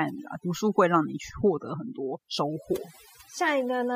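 Overdone noise removal runs throughout this speech. The noise reduction was set too aggressive, switching off individual frequency bands that come close to its noise estimate, taking softer parts of the voice too. Between phrases the background drops and breaks up into twinkling specks.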